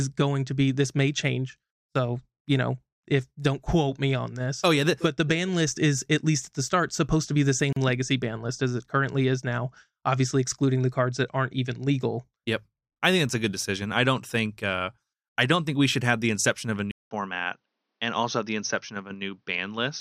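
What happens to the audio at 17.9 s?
The input likely switched to a poorer device after "the inception of a". From 16.91 s to 20.00 s the sound turns dull, slightly quieter and cut off above 6.4 kHz.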